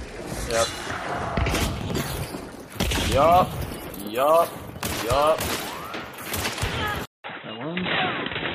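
Chunks out of order occur at 1.81 to 1.95 s, 3.72 to 3.90 s and 4.92 to 5.02 s. At each point a block of about 46 ms plays after material that should follow it, displaced by roughly one to three block lengths. Nothing is missing, but the reshuffled sequence creates hard joins, and each spot sounds like a brief jumbled stutter.

An input switch to a poorer device begins at 7.05 s and lasts to the end of the audio. A gap of about 187 ms of silence marks the change. After it, the sound turns dull and boxy, with nothing above 3.9 kHz, and a new noise floor appears about 30 dB below the signal, while loudness stays about the same. The likely cause is the recording system moving to a narrower-band microphone or a headset call profile partway through.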